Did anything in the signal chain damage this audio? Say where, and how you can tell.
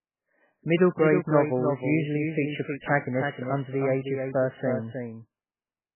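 Yes. The speech carries a doubled audio track throughout. A second full-band copy trails the original by roughly 300 ms, about 5 dB quieter, with no decay or room colour. It is likely a slower second capture path, or an edit, leaving two copies out of step.

MP3 compression damage is heavy across the whole clip at the codec stage. Nothing remains above 3 kHz, and weak spectral lines switch on and off between frames, giving a watery, swirly texture with smeared attacks. That fits a very low bitrate, around 8 kbps.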